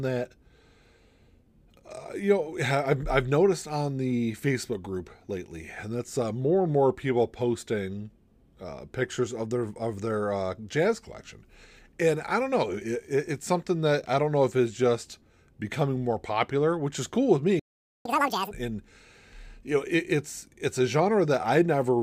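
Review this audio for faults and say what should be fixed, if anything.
Playback stall, 17.59 to 18.05 s: the player likely ran out of buffered data or had its output thread blocked, so the output drops to silence for 0.46 s. The sound cuts off abruptly in mid-flow, leaving a clearly audible gap before audio resumes.

Catch-up at higher speed, 18.05 to 18.51 s: to win back the lost time, the player resamples its queued backlog at 2.0 times normal speed. For about half a second the audio rushes forward with its pitch raised by roughly ten semitones, then drops back to normal speed and pitch.

To prevent both, keep a deeper playback buffer and run the audio thread at high priority so it is never starved or blocked. If a stall still happens, recover through gentle time-stretching or skipping ahead rather than double-speed resampling.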